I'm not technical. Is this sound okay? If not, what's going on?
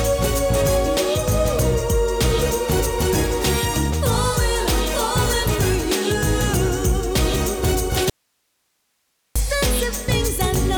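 No. From 8.10 to 9.36 seconds there is an audio dropout to a faint residue. The sound suddenly vanishes for about 1.3 seconds, leaving only a very faint hiss. It then snaps back. The signal was likely lost briefly while the recording line stayed on.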